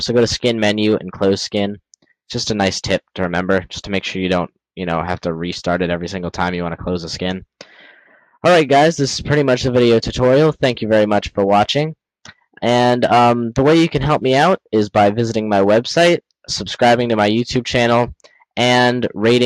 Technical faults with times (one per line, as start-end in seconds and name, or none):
8.06-8.36 sound cut by the noise suppressor